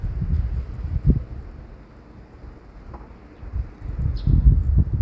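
No technical faults are audible.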